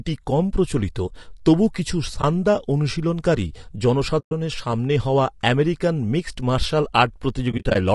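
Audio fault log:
throughout: low-delay AAC compression. The speech is plainly rough and grainy, with a hiss-like fill between the harmonics and an upper band that sounds thin and synthetic. This is likely AAC-ELD at around 32 kbps, the low-delay codec of video calls. Its very short frames cannot separate closely spaced pitch harmonics well and spend bits inefficiently, so at this rate the coder smears noise into the gaps and rebuilds the top band coarsely.
2.21 to 4.32 s and 7.51 to 7.76 s: AAC frame loss with muting. Three soft-edged dropouts occur. At 2.21 s there is a brief 20 ms hole. At 4.19 s the sound vanishes for 120 ms. From 7.51 to 7.76 s, 120 ms of audio drops out in scattered gaps across about 240 ms, the longest run roughly 40 ms. The decoder zeroes each lost frame's spectrum, and the overlapping windows fade the sound out and back in, so the holes have soft edges.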